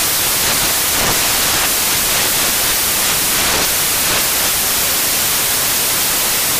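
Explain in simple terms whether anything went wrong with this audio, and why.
Something went wrong for the whole clip: the sound is buried under loud, harsh hiss, like white noise on the louder parts, from start to finish. The fault is samples built from the wrong bytes. The player assembled each sample's bytes in the wrong order or at the wrong offset, so the tiny, fast-changing detail bits ended up as the big part of every value, turning the sound into noise.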